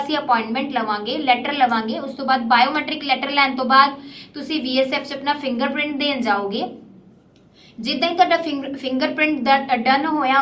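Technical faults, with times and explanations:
No technical faults detected.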